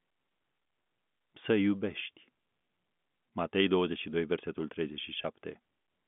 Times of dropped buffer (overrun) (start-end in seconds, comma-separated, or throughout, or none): none